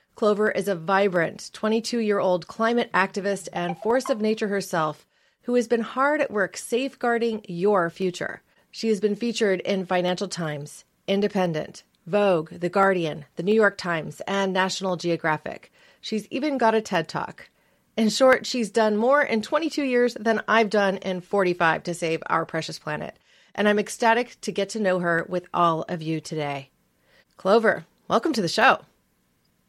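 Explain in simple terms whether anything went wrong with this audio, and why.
A steady click, about every 0.69 s, runs from 0.47 s to 29.3 s, around forty in all, over the speech. This is likely clock drift buffer slips: two devices' clocks disagree slightly, so a buffer periodically drops or repeats a few samples.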